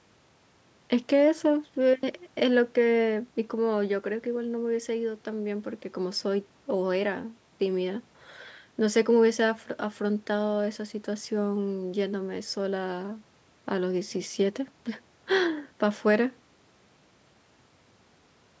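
No technical faults turn up here; the speech comes through the usual call microphone processing, which trims the lowest bass and leaves nothing above 8 kHz, and that's just how that path behaves.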